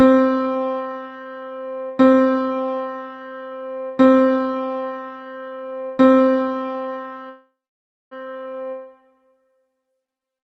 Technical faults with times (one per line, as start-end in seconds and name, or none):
7.29-8.13 call audio freeze